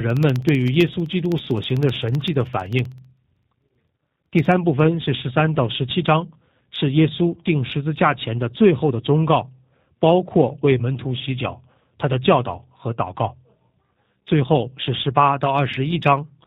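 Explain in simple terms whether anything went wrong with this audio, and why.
Two things went wrong. From 0.10 to 4.52 s there are periodic USB or driver dropouts: every 64 ms a tiny fraction of a millisecond of audio is replaced by silence, about seventy times, heard as a steady ticking under the speech.

Throughout the clip, the speech has also passed through the G.729 codec, a low-rate phone-call format that rebuilds the voice from a simplified model. Everything above 4 kHz is gone, so the speech sounds muffled, slightly rough and synthetic, though it stays intelligible.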